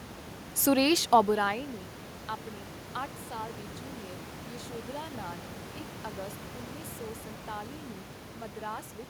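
The speech recording shows no technical faults: the signal holds together with no dropouts, glitches or other defects introduced along its path.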